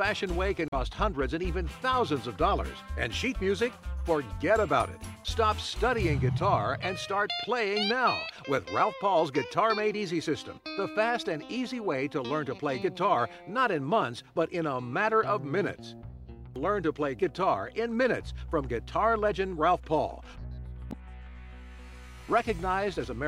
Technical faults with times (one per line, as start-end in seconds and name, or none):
0.67-0.74 damaged data in a compressed stream
20.89-20.94 damaged data in a compressed stream